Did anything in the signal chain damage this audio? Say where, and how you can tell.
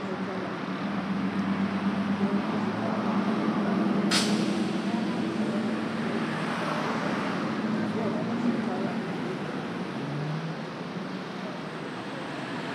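No, nothing along the chain seems to have left a mark on this one; I can't hear any damage anywhere in it.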